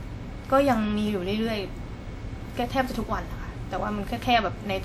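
A speech clip with generation loss throughout its length: the sound is swirly, smeared and hollow, with blurred attacks, yet it still reaches up to 20 kHz. That full bandwidth sets it apart from a single low-bitrate encode, which would dull the top and leave nothing like this much artefact at this level. The likely cause is repeated lossy re-encoding, around seven passes, with a character that points to a WMA-type codec at roughly 96 kbit/s. Each pass re-quantises on a shifted frame grid, so noise builds up.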